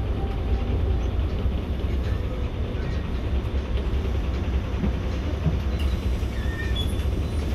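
Everyday sounds, with nothing technically wrong to hear.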